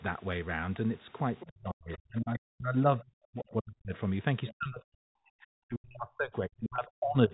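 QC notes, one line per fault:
1.40–1.47 s, 1.92–1.98 s, 4.47–4.54 s: other side's voice leaking through. Brief scraps about 20, 30 and 25 dB below the talker, likely residual loudspeaker echo the canceller missed.
1.47–3.93 s and 4.51–7.33 s: speech suppressed in double talk. The talker's voice dips by up to about 40 dB, likely because the canceller attenuated both sides during overlap.
6.76–6.78 s: packet loss with pitch repetition. One 20 ms gap is bridged by a repeated pitch period, heard as a brief held, buzzy tone before speech resumes.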